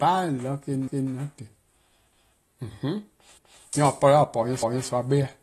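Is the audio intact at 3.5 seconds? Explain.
No. From 3.37 to 3.63 s there are overlapping chunks: the next chunk begins before the previous one finishes, so 250 ms of audio plays twice, heard as a click or stutter. The waveform shows that stretch duplicated back to back, with a seam at the join. This fits chunks of about one second.

Throughout the clip, and so at this moment too, the speech has plainly audible codec damage, likely from AAC compression at a low bitrate near 32 kbps. A spectrogram shows nothing above 12.4 kHz and a patchy, smeared upper band.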